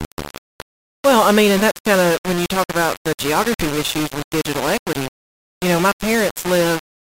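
Throughout, the speech carries grainy distortion that follows the signal, likely low bit depth without dither at 4 bits, unlike steady hiss, which would stay constant regardless of level.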